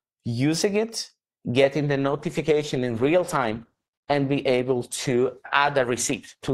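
At 1.90 s the audio switches without any gap to an adaptive stream at a lower bitrate, and stays there to the end. The speech loses its air and nothing remains above 12.3 kHz. Codec artefacts rise, which points to a fall from about 64 to 16 kbit/s after the connection slowed. Unlike a dropout or glitch, the sound never breaks; unlike a simple filter, the artefacts grow along with the duller treble.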